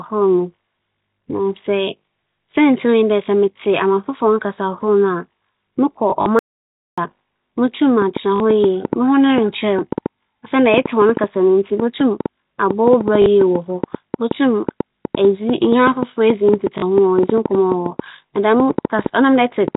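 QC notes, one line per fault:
6.10–6.26 s, packet loss with last packet repeated: 60 ms lost in a 160 ms stretch, longest gap 40 ms. The replayed audio is misaligned with the pitch, giving a short robotic stutter.
6.39–6.98 s, audio dropout to silence: the sound cuts to dead digital silence for about 0.59 s, with no room tone. The likely cause is a momentary loss of the input signal.
8.02–19.76 s, train of clicks: about 70 similar pops at an irregular pace, averaging 5.5 per second and peaking roughly 15 dB above the signal. They are audible in pauses too, likely from interference or a faulty connection.
8.36–8.40 s, 13.22–13.26 s, 16.78–16.82 s, packet loss with last packet repeated: each gap is 40 ms, which fits two 20 ms packets. The repeated packet produces a brief buzzy stutter.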